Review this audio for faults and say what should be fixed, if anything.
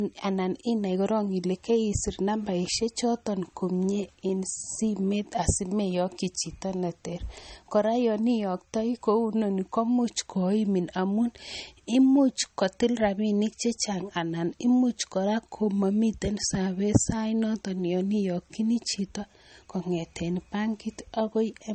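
Low-bitrate audio saved at a high bitrate, throughout: smeared MP3 coding artefacts fitting a 32 kbit/s source, likely re-encoded at 256 kbit/s, which cannot restore the lost detail. To prevent it, re-export from the original recording or a high-bitrate master instead of re-encoding an already compressed low-bitrate file.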